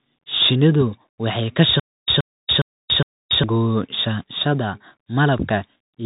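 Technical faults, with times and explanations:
Throughout: Bluetooth CVSD headset codec. Nothing above about 3.8 kHz survives, so the speech sounds boxed into a telephone-width band. The sound is coded as a stream of single up-or-down steps whose size adapts, which fits a 64 kbps CVSD link. Fast, loud high-frequency movement outruns those steps and smears into distortion, sibilants come out rough and scratchy, and a grainy hiss sits beneath the speech the whole way through, plainly audible.
1.80 to 3.44 s: Stutter with silent gaps. Just after "waxay ka", a 125 ms burst of audio plays four times at a steady rhythm, one every 410 ms, with about 285 ms of dead digital silence between repeats. This is likely a stalled player or stream that replayed its last buffered fragment at each retry and then ran dry. Whatever should have been heard during this stretch is missing, not delayed.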